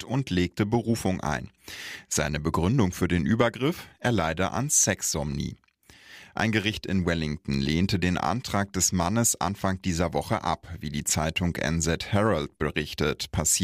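At 7.54 s, just before "lehnte den", a sharp snap sits on top of the speech, likely an electrical switching spike from a nearby switch or discharge arcing into the line.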